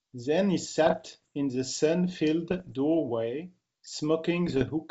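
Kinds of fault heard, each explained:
Bit errors on an ADPCM link: flipped bits knock the decoder's step size and predictor off track, giving pops and rough, uneven bursts in the speech around 0.9, 2.5 and 4.5 s.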